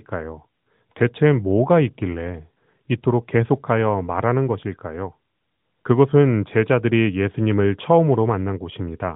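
No technical faults can be heard in the speech, which comes through a narrowband mobile path whose band stops at 4 kHz and whose light AMR-NB coding character fits the codec's highest-rate 12.2 kbps mode.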